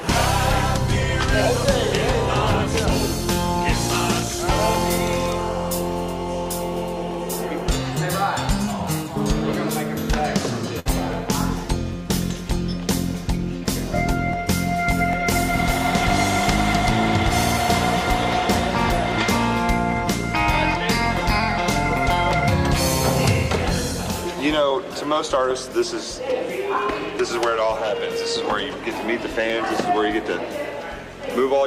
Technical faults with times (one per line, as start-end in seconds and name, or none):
0.77-31.66 clock drift buffer slips
10.79-10.87 burst of packet loss